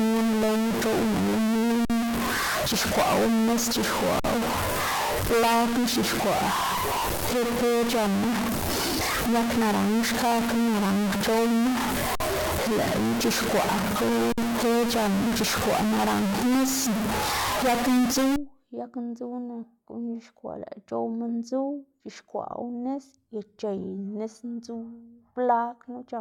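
A stuck bit runs from 0.0 to 18.36 s, ending just before "yag ndzuw": the speech carries distortion and the pauses fill with hiss. The likely cause is one data bit held fixed, so about half the samples are offset by its weight.

A gap at a join of encoded pieces opens at 1.85, 4.20, 12.15 and 14.32 s, each a gap of about 48 to 53 ms with smeared edges. Separately encoded segments were spliced untrimmed, leaving encoder delay and final-frame padding before speech resumes where it stopped.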